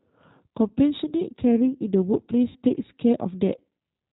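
Throughout, the speech carries G.729 codec coloring. The audio is rebuilt at 8 kbit/s from a vocal tract filter, a pitch predictor and a few pulses per frame. Nothing above 4 kHz survives. The voice sounds muffled, slightly rough and synthetic.

From 0.68 to 0.73 s, VoIP packet loss concealed by the speech codec fills a 20 ms gap, which fits a single lost packet. The decoder repeats its last pitch and filter at falling gain. A brief buzzy smear replaces the sound. At 2.49 to 2.58 s, a longer 60 ms loss, consistent with three packets, stretches into a fading tone. The voice stays weak briefly afterward.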